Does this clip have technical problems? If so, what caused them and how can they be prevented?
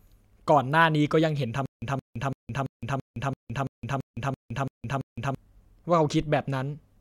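Yes. From 1.66 to 5.35 s, a stutter with silent gaps repeats a 172 ms fragment 11 times, each followed by 164 ms of silence, likely a stalled stream replaying its last buffer. Prevent it with deeper playback buffering and a steadier data supply.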